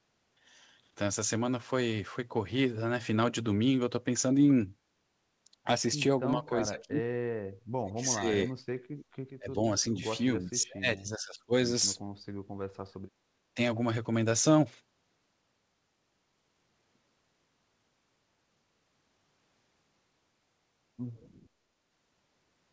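Speech suppressed in double talk begins at 6.36 to 7.02 s, where the voice sinks by up to roughly 20 dB. This is likely an echo canceller that, with both ends talking at once, could not tell this talker from the returning loudspeaker signal and pulled both down. Inside that stretch, at 6.79 to 6.83 s, an echo leak appears: a faint delayed copy of the voice, lagging by 382 ms and sitting some 25 dB below the speech. It is likely residue the far end's canceller failed to remove and sent back.

The double-talk suppression returns at 7.75 to 8.52 s, with a dip of around 35 dB that nearly cuts the voice out. It comes again at 9.37 to 9.63 s, at roughly 25 dB. The longest stretch runs from 10.45 to 11.52 s and lasts about a second, with drops near 30 dB. Within it, at 10.61 to 10.65 s, the same 382 ms echo leaks through again, about 30 dB down.

Background gated by the echo canceller follows at 12.43 to 13.03 s. 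The room sound falls away by about 22 dB for roughly half a second while the loudspeaker plays, then comes back when the canceller releases its hold on the microphone.

A last brief suppression at 13.55 to 13.59 s clips the voice by around 10 dB. Throughout, the audio stops at 8 kHz, which points to a G.722 call codec running at 64 kbps.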